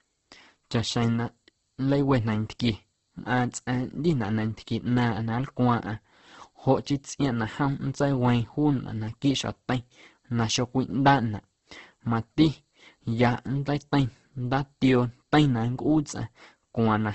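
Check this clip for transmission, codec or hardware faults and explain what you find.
One codec fault runs through the whole clip. Likely Opus compression, near 12 kbps. Starved bands are noise-filled, so the speech sounds grainy and rough, with nothing above 8.2 kHz.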